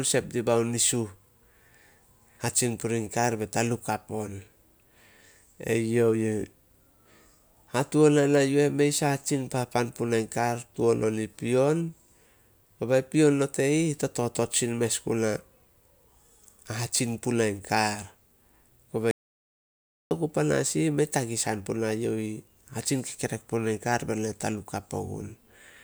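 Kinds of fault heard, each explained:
Audio dropout to silence: at 19.11 s the speech cuts off abruptly into silence, with no room tone, and comes back mid-flow at 20.11 s. The input was likely lost while silence kept being written, so about one second of speech is gone.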